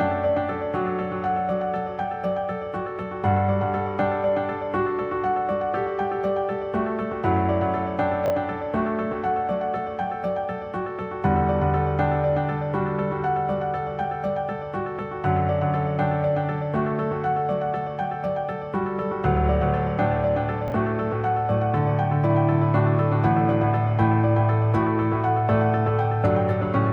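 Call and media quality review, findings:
Chunks out of order at 8.26–8.30 s and 20.68–20.72 s: quick jumbled blip. One 20 ms chunk lands a slot late, swapping with its neighbour. Probably the jitter buffer or writer releasing late packets without reordering.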